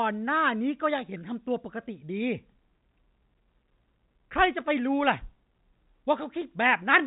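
No faults are present in the speech; the G.711 A-law telephone path is audible only as the usual 4 kHz band ceiling, with at most a faint quantisation hiss riding on the signal level.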